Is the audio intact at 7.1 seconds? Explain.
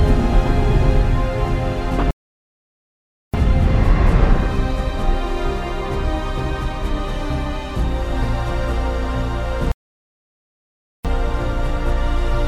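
Yes, the audio is intact at 7.1 seconds, with no dropout, click, distortion or other fault at that moment.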